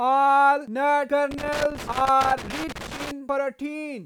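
Loose connector crackle runs from 1.31 to 3.11 s in this speech recording: a worn contact repeatedly breaks and remakes, chopping the signal into irregular scratchy bursts.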